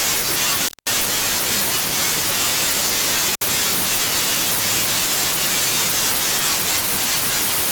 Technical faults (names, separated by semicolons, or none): intermittent contact